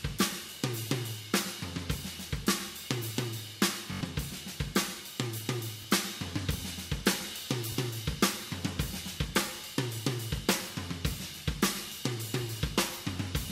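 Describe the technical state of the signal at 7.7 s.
A repeated buffer occurs from 7.72 to 7.74 s. Audio arrived late, so the last block of about 21 ms, which fits a 1024-sample buffer, plays once more with hard joins and roughly 20 ms of new sound lost. It is a quick stutter or click. Unlike a dropout, it repeats the preceding sound rather than going silent.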